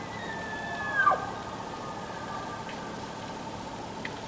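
Nothing goes wrong anywhere in the clip, and the only thing to notice is the top-end limit of a call connection, with nothing above 8 kHz, which fits a wideband codec like G.722 carrying it along without trouble.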